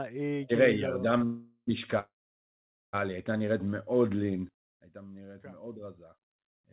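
At 1.18 s there's a short stall from a late packet. The jitter buffer ran dry for a moment, so the receiver held the last bit of speech about 25 ms longer than it should have and then picked up right where it left off. Nothing is lost. You just hear a tiny smear with a faint buzzy dip before things carry on.

Right after, from 1.25 to 1.69 s, comes the first call audio freeze, likely packets held up in the network again. This time the fill runs about 427 ms. The receiver keeps extending the last sound as a fading buzz that thins out to near-silence for the final 30 ms or so. Then the audio resumes from the same spot, so the speech is pushed later rather than cut.

The second freeze, from 1.99 to 2.95 s, is the same story but much longer, about 938 ms of fill. The stretched buzz dies away quickly, and around 820 ms of that is basically silence before the speech comes back in sequence. It's a clear dropout-style gap.

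At 4.49 s there's a sudden gain jump. Level falls by about 14 dB in one step with no ramp, likely a digital gain setting applied abruptly. The speech and the background noise both drop together, and the level stays down to the end of the clip. All of this sits on a narrowband G.711 line with nothing above 4 kHz.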